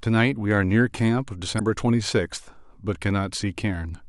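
A short speech clip with one fault. From 1.56 to 1.61 s there is a brief glitch caused by damaged data in a compressed stream. Some bytes in the encoded file were corrupted. The decoder misread those frames, lost sync, and jumped to the next valid frame header.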